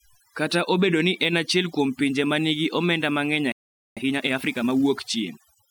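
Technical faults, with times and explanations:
Throughout: overdone noise removal. Background drops and breaks up into twinkling specks, as aggressive noise reduction gates bands near its noise estimate.
3.52–3.97 s: playback stall. Sound cuts to silence for about 0.45 s mid-flow, likely from the player running out of data or a blocked thread.
3.97–4.85 s: time-compressed catch-up. Speech hurries at 1.5 times speed without pitch change, as small pieces are cut and cross-faded to clear the backlog.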